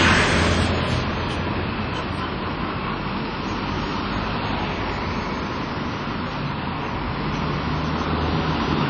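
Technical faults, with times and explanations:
throughout, WMA compression: ringing, washy smearing and hiss that breathes with the sound, likely a low-bitrate encode around 32 kbps; the spectrogram is empty above 10 kHz.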